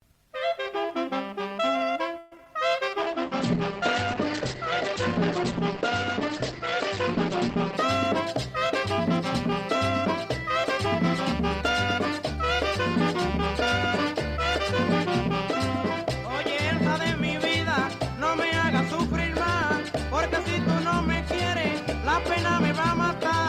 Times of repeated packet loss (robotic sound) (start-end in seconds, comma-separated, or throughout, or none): 2.18-2.46